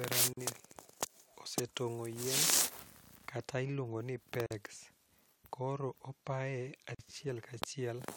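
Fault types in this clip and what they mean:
Gap at a join of encoded pieces: The speech was encoded in separate pieces and joined without trimming. Each piece keeps its encoder's leading silence and padded last frame. So short silences cut into continuous speech. They come at about 0.33 s, after "kata iluongoni" at 4.46 s, and after "koro opaye" at 6.95 s. Each lasts about 42 to 45 ms. The codec smears their edges. The speech then resumes where it stopped.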